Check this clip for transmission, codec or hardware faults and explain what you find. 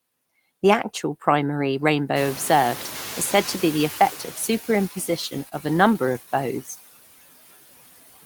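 Three things are going on here, all on the processing and network side.

Noise suppressor artifacts run through the whole clip. The suppressor pulls down whatever bands it reads as steady noise, about 16 dB, frame by frame. The leftover noise sinks between phrases and rises under the speech.

From 2.15 to 4.61 s you hear the noise suppressor catching up. The room noise jumps by about 18 dB just after two seconds, and the suppressor's noise estimate lags. At first only about 8 dB comes off, so the noise sits louder, then it sinks over roughly two and a half seconds as the estimate adapts. The room noise itself, sitting about 17 dB under the speech after that rise, is just the environment, not a fault.

There are two short stalls from a late packet, at 5.49 to 5.54 s and at 6.13 to 6.18 s. Each time the jitter buffer ran dry, so the receiver held the last sound, about 25 ms the first time and 16 ms the second, until the packet turned up, then carried on. 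Nothing's lost, but you get a brief stretched hitch with a slight buzz or dip.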